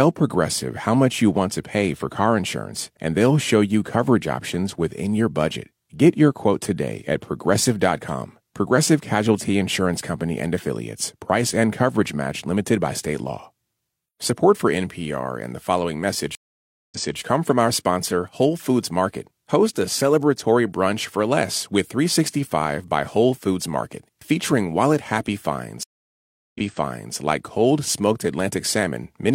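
Speech, broken twice by a stream reconnect. At 16.35 s the audio drops out for 566 ms, then resumes about 0.28 s earlier, repeating material; at 25.83 s a 717 ms silence is followed by a jump back of about 0.6 s. Each time the connection was lost and a fresh decoder restarted mid-stream from a resent burst. On a waveform or spectrogram each shows as a flat, full-band gap followed by a repeated stretch.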